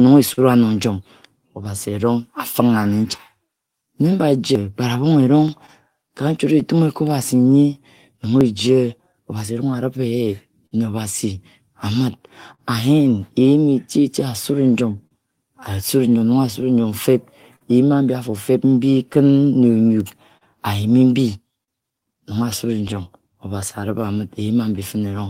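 Speech runs through clock drift between sender and receiver for the whole recording, the sender's clock running roughly 3% slow, so the receiver's jitter buffer keeps draining and must be topped up with stretched or repeated material to avoid running dry. Repeated timing corrections from 1.48 s to 25.28 s are that compensation: small repeated slices, all lengthening, unevenly spaced, adding roughly 400 ms in total and slowing playback to about 99% speed, heard, if at all, as slight hiccups or an unsteady tempo. Scattered short gaps fall in three stretches: 0.33 to 3.20 s (about five, longest around 40 ms), 5.05 to 10.73 s (about seven, up to about 50 ms) and 14.43 to 24.79 s (about ten, up to about 50 ms). These are isolated lost or late packets, each patched by extending the preceding sound, so nothing is missing but brief smears and ticks appear. Dropped samples at 5.48 s, 8.41 s and 22.89 s are each a single sharp click, a waveform jump where likely well under a millisecond of samples has gone. 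A short stall from a late packet at 12.54 to 12.61 s holds the sound for 42 ms while the buffer sits empty, then resumes from the same point, leaving a stretched moment with a slight buzz or dip.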